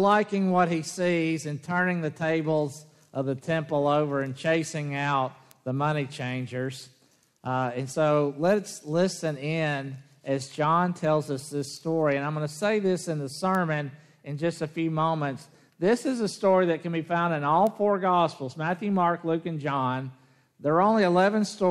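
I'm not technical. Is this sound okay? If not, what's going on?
No. There are three bit error spikes, at 5.51, 13.55 and 17.67 seconds. Each is a single sharp tick, caused by one flipped digital bit briefly corrupting the sound.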